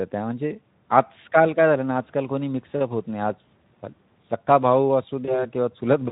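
Speech encoded with Speex, lightly coloured at about 15 kbps, shows VoIP packet loss concealed by the speech codec from 5.25 to 5.45 s. A single 20 ms frame is replaced by a fading extrapolation of the preceding sound rather than the clean gap or click of a plain dropout.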